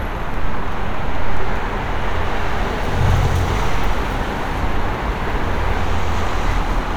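A periodic USB or driver dropout skips roughly a millisecond of audio every 1.02 s, from 0.34 to 6.50 s, leaving about seven evenly spaced ticks.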